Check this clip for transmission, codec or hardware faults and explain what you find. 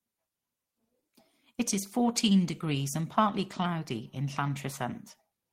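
Nothing wrong can be heard anywhere in this recording.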